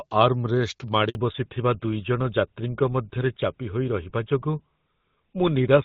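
At 1.09 s the speech cuts out in a handover gap lasting 60 ms, until 1.15 s. No frames arrived while the call switched networks, so the voice dies away within a few tens of milliseconds and then resumes on the new link.

From 1.15 s to the end comes the fallback to narrowband. Up to the gap, the clear HD Voice band of the AMR wideband codec, which fits about 12.65 kbit/s, can be heard. After it, nothing remains above 4 kHz, and the dull, rough sound fits GSM full rate. The sudden, permanent step at the handover sets it apart from a gradual low-pass fade.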